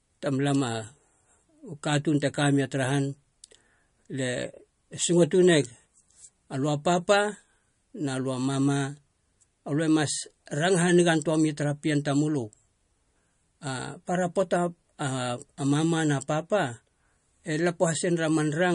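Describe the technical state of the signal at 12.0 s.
At 12.0 s the speech shows low-bitrate audio saved at a high bitrate, and the condition runs through the whole clip. Nothing sounds above 10.6 kHz, and the top end has the dull, smeared quality of a heavily compressed MP3. That points to a low-rate encode likely re-saved at a much higher rate, which cannot restore the discarded detail. Unlike a clean low-pass filter, the cut-off comes with the first codec's lingering artefacts.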